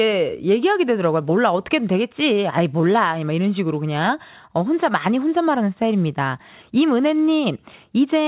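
No technical faults can be heard in the speech, which arrives over a call connection whose band stops at 4 kHz, consistent with the G.711 mu-law codec, so nothing is present above that limit.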